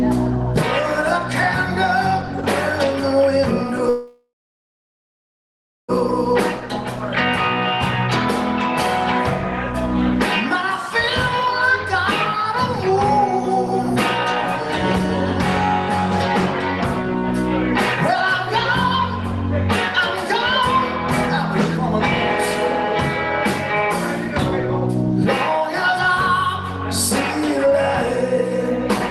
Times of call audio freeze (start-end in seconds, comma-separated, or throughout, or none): 3.89-5.90